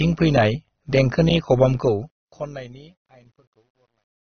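From the start, the speech has a dull, band-limited top end. Over that sits a mix of dissimilar coding artefacts heard together. This is likely transcoding between lossy codecs. A low-rate AAC-style encode at about 27 kbit/s came first, and a second encode, which fits WMA at a higher rate, re-coded those artefacts and added its own rather than repairing them.

Also running the whole length is overlap-add ripple. The level pulses by about 6 dB at roughly 100 Hz, heard as a metallic buzz with extra tones around each note. It comes from the frames being resynthesised with windows whose overlap does not sum to a constant gain, so the level dips and rises once per frame.

From 1.76 s to the end, the fade-out shows truncation distortion on a fade. As the level drops, the signal becomes gritty, and the grit is worst from 2.82 s to 4.28 s. That behaviour fits an undithered gain stage holding about 11 bits, so the quiet waveform collapses into a few coarse steps.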